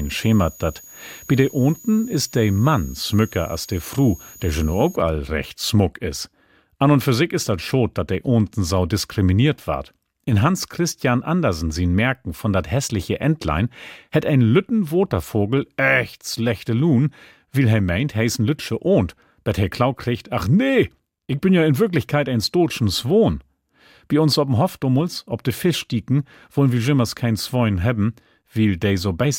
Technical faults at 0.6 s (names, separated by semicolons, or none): switching supply whistle